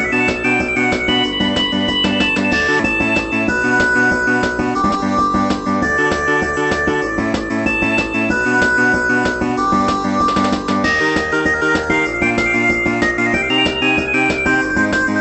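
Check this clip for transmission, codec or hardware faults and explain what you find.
Two transmission faults are audible: one skip ahead followed by three bursts of jitter buffer speed-up. The call path's codec band-limits the sound at about 8 kHz, which fits Opus at a moderate bitrate near 32 kbps.

Skip ahead at 2.8 s: about a second and a half of audio was discarded while later audio was already queued, so playback lurches forward with no fill at all. The two sides of the cut are butted together, giving an abrupt jump in the sound rather than a silence.

Jitter buffer speed-up at 3.51–4.99 s, 6.03–6.95 s and 11.33–11.87 s: the receive buffer was holding more audio than its target. To shrink the backlog, it repeatedly clipped out pitch-period-sized slivers. The first stretch runs about 14% fast, losing roughly 200 ms. The later two run about 7% and 10% fast, losing roughly 70 ms each. 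Pitch stays put, but the sound feels hurried in those spans.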